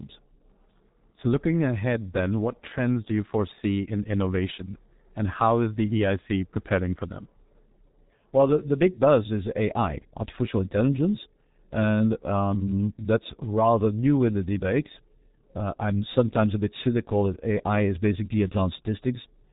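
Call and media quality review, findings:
G.723.1 codec, whole clip. Speech muffled and hoarse, consonants smeared. Nothing above about 3.8 kHz, so the top end is just gone. Damage is heavy. The grainy, slow-updating voice model fits the 6.3 kbit/s mode. It packs speech into 30 ms frames and can't track fast consonant changes, hence the blur. Probably a narrowband G.723.1 leg somewhere in the path. Worth checking codec negotiation.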